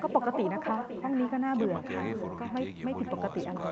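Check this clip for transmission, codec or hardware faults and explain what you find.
One fault runs through the whole speech clip: echo with no canceller. The far end's loudspeaker feeds its microphone, and nothing strips that pickup, so the talker's own speech returns after roughly half a second, about 7 dB quieter and thinner. On a waveform each burst is trailed by a smaller copy; a spectrogram shows repeated patterns offset in time. The band stops at 8 kHz, as expected from the call path.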